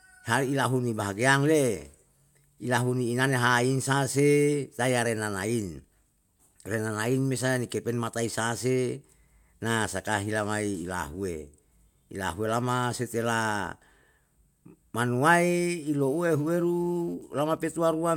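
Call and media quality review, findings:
GSM phone buzz, 15.99–17.14 s: hard raspy 217 Hz buzz with dense harmonics, about 32 dB below the speech. Nearby 2G handset in a call; audio circuit rectifying its RF bursts.

GSM signalling bursts, 17.21–18.06 s: even ticks with a longer 217 Hz buzz twice a second, roughly 30 dB down. Nearby 2G handset in a call with its user silent; sparse burst groups rectified by the audio input.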